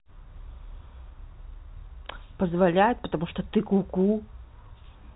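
Speech over G.711 telephone coding, band-limited to about 3.9 kHz as that format requires, with no technical faults heard.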